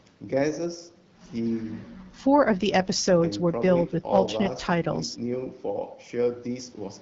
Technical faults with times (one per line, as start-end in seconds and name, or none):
none